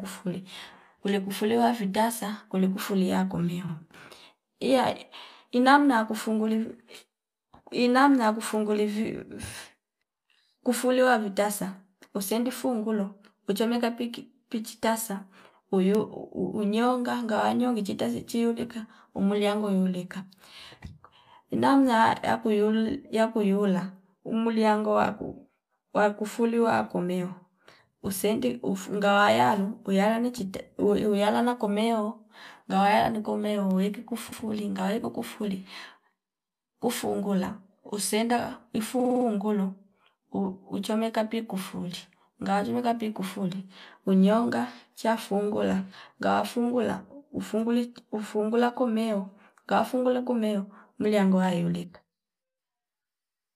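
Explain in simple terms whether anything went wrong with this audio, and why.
Repeated frames make the speech stutter: a 52 ms slice plays twice after "vitasa kuli kufulia yakumio" at 3.67 s, a 105 ms slice repeats at 34.31 s before "ngaweki kufuli", and at 38.99 s a 52 ms slice loops five extra times. Chunks of compressed audio were simply sent again.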